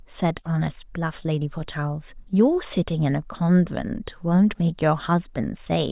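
No technical faults can be heard anywhere in the speech recording, and the signal stays steady and intact throughout.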